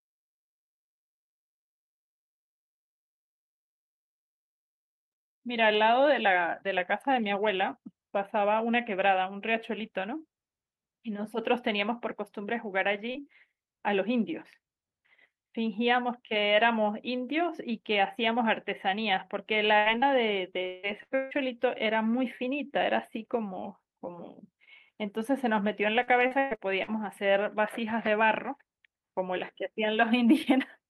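At 13.11 s there is a short concealed packet loss of about 40 ms. The decoder never received that piece of the speech in time and covered the hole by extending the preceding sound for roughly 32 ms before blending back into real audio. It comes across as a brief smear or wobble in the speech, with whatever fell in that slot gone.

From 19.79 to 19.89 s a burst of packet loss removes about 80 ms. The receiver continues the last sound for around 71 ms while turning it down, so a voiced sound lingers as a held buzz, or an unvoiced one as a fading hiss, before the speech resumes further along. Immediately after, from 19.98 to 20.09 s, a second short concealed packet loss drops another 40 ms, patched over about 35 ms, and stretches that passage by roughly 20 ms.

The stretch from 20.67 to 20.86 s sounds like a long network dropout of about 160 ms. Nearly all of it, around 159 ms, is filled by an extended, decaying continuation of the previous sound rather than silence, and the speech picks up later with that section lost. 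At 21.03 to 21.14 s another burst of packet loss removes 80 ms, bridged by roughly 83 ms of fading continuation. Right behind it, from 21.15 to 21.34 s, a second gap of the same size, likely another long network dropout, is again almost entirely covered, about 156 ms, by a trailing buzz or hiss, and the content in between is missing.

From 26.03 to 26.90 s there is repeated packet loss with a robotic sound. Five separate gaps, the longest 121 ms, remove about 280 ms in total, and concealment fills roughly a third of the span. Each hole is patched by repeating the last sound, and the next follows quickly, so the speech turns choppy, with fragments missing throughout.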